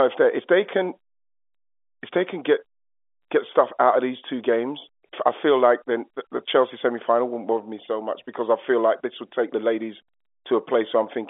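No faults are audible in this speech; it is carried over G.711 telephone coding, with the band limited to roughly 300 Hz to 3.5 kHz as expected for a telephone line.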